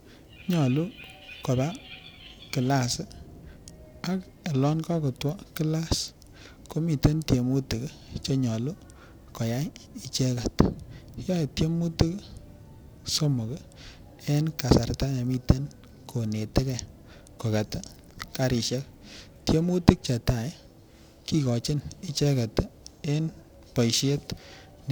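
Periodic clock jitter runs through the whole speech recording. A steady interference tone of around 1 kHz is wobbling the converter's sampling clock, so each frequency in the sound picks up sideband copies roughly 1 kHz above and below it. Sibilants and upper harmonics pick up the strongest sidebands, giving a metallic, ring-modulated edge that disappears in the pauses. Random jitter would instead add a smeared noise floor. Here the added tones track the signal at a fixed spacing.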